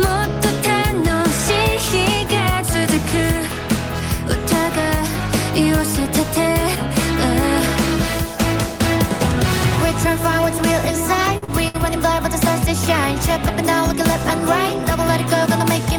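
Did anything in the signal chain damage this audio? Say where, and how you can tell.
Yes. At the network and jitter buffer stage, there are three short stalls from late packets: 11.37 to 11.44 s, 11.44 to 11.50 s, and 11.68 to 11.76 s. Each time, the buffer ran dry and the receiver held the last sound for 49, 37 and 64 ms before resuming where it left off, so nothing is lost but the timing stretches. On a spectrogram these look like smeared horizontal bands, and the waveform shows a repeated, slightly buzzy cycle instead of fresh material.

Right after, at the storage and playback stage, four CD scratch ticks fall between 11.87 and 12.52 s, about six per second, which fits one blemish being hit on each disc revolution. The damage exceeded what error correction could rebuild, so the player patched or muted the samples, with the longest gap about 2 ms. On the waveform these are tiny spikes or flattened notches. 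On a spectrogram they are thin, full-height vertical lines at regular spacing.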